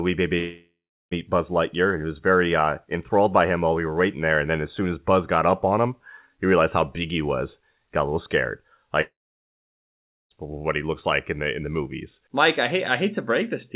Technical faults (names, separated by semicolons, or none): long network dropout